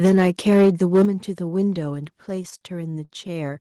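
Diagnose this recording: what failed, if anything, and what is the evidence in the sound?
Microphone overload at the converter stage: from 0.03 to 1.05 s the loudest syllables carry a harsh, crackling edge. Peaks are driving roughly 6 dB past full scale, so their tops are flattened, and a noticeable fraction of the waveform, around 7 percent, sits pinned at the limit. The cause is likely an input gain set too high. Unlike codec distortion, the crackle tracks peak loudness and stops once the level comes down.

Microphone volume stepped down, in call processing acting on the device gain: the whole signal, background included, drops abruptly by about 2 dB at 0.06 s, about 7 dB at 1.05 s and about 3 dB at 2.07 s. The 1.05 s step ends the overloaded stretch, which fits automatic gain control cutting the input after distorted peaks. A compressor's gain changes ride smoothly with the signal, but these happen in single steps and each new level holds.

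Repeated stalls (stutter), a jitter-buffer problem on the receiving side: between 2.29 and 3.58 s the sound drags and hitches about eleven times. The receiver stretches the last sound to fill each hold-up, and the longest lasts about 40 ms. Together they add about 179 ms, roughly 14 percent of that span, and nothing is actually lost. That distinguishes it from packet loss, where audio is missing: here the sound arrives late and is only delayed.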